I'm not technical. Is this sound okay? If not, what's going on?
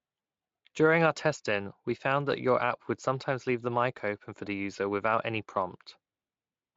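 Yes, this sound is okay, with nothing going wrong in it.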